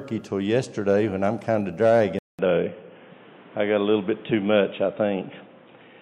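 At 2.19 s the sound drops out for 200 ms, then returns dull and boxy through to the end, with nothing above 3.8 kHz, a new noise floor about 30 dB below the signal, and little change in level. This points to an input switched to a poorer device, likely a narrower-band microphone or headset call profile.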